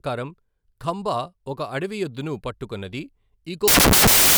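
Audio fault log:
3.68 to 4.38 s, samples built from the wrong bytes: the reader assembles each sample from misaligned or swapped bytes, so the rapidly changing low-order bits land in the high-order positions. For the final 0.7 s the speech collapses into loud, harsh broadband noise, close to white on the louder sounds.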